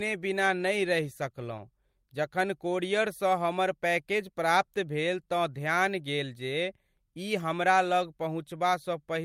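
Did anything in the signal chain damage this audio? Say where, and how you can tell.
No, nothing along the chain seems to have harmed this speech recording; I listened for trouble at every stage and came up empty.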